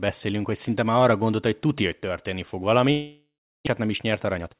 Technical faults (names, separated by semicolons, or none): long network dropout; jitter buffer speed-up